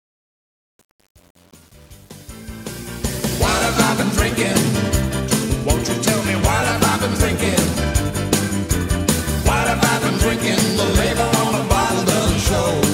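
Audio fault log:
0.00 to 3.52 s, truncation distortion on a fade: the fade-in starts gritty, worst up to about 3.26 s before cleaning up. The gain stage kept roughly 8 bits with no dither, so low levels collapse into coarse square steps.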